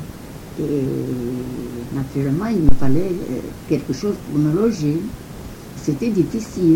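At 2.69 s comes a phantom power thump. A supply switched on or off on the live input sends a DC step through the coupling capacitors, giving a deep thud that decays within 111 ms and ends by 3.18 s. Unlike a handling bump, it has no rustle.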